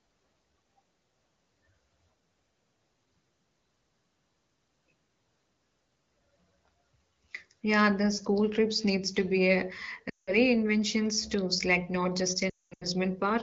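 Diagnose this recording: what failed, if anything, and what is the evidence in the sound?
Lost AMR speech frames on the radio link caused the failure. The codec stage is not at fault: the wideband AMR sound is clear, which fits a rate of about 16 kbit/s. At 10.09 to 10.38 s the speech drops to near silence within two frames across roughly 180 ms of loss, which fits nine 20 ms frames. The decoder repeated the last good pitch and vocal tract settings with falling gain. At 12.49 to 12.87 s the losses are scattered, with one 220 ms run that dies toward silence before a weak or rough recovery.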